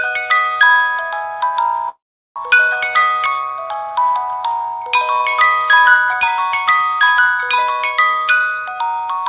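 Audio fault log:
1.89 to 2.37 s, long network dropout: the sound stops carrying new material for about half a second. What's there at first is the last bit stretched into a fading buzz, and then it falls to near silence for most of the gap, roughly 380 ms of it. When the audio resumes, about 300 ms of the original just isn't there. That pattern is most likely a burst of lost packets that the receiver had to paper over with concealment.
2.44 to 3.91 s, jitter buffer speed-up: right after the gap, the audio runs about 11% fast while the pitch stays put, so it comes across as rushed rather than chipmunky. Once delayed packets caught up, the buffer was holding more than it wanted, so the receiver trimmed out tiny pitch-period-sized slices over and over, roughly 150 ms in total, to pull the delay back down. Underneath both, the G.711 call path keeps everything below 4 kHz.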